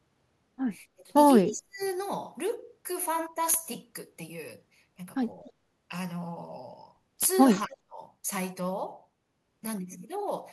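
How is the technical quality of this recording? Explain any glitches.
The recording has a few short dropouts early and late, plus one brief, faint echo in the middle.

Speech suppressed in double talk shows up three times: 0.95 to 1.11 s, 1.43 to 1.81 s, and 7.66 to 8.00 s. The voice suddenly sinks, by roughly 25 dB in the first, close to 40 dB in the second, and about 30 dB in the third, so it briefly goes hollow or nearly vanishes. The likely cause is an echo canceller that heard both ends talking at once, couldn't tell the local talker from the loudspeaker echo, and turned everything down.

Echo leak appears at 5.45 to 5.52 s, a quick, very quiet scrap of the voice coming back 251 ms late, sitting around 35 dB under the main speech. It's most likely a speakerphone on one side whose echo canceller let a little of the loudspeaker sound slip through its mic and back down the line.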